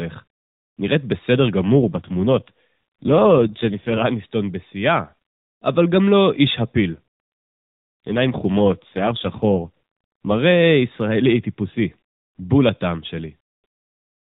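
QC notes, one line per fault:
1.62–4.03 s and 6.91–10.40 s, AMR rate drop: the speech turns rougher, buzzier and more synthetic, with the band unchanged and no gap, then clears. The mobile codec likely stepped down from its usual rate, pointing to about 12.2 down to 5.9 kbps, leaving fewer bits for each 20 ms frame.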